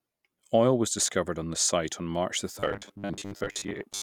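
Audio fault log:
2.56 to 4.02 s, robotic sound from repeated short buffers: the speech goes rigid and metallic, locked to a 100 Hz buzz that roughly tracks the words. That's likely about half the audio being replaced by loops of the last 10 ms when fresh samples arrived late.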